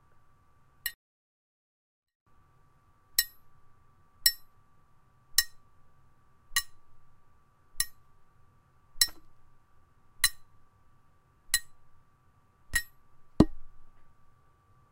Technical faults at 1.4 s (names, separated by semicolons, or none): 24-bit alignment error (too quiet)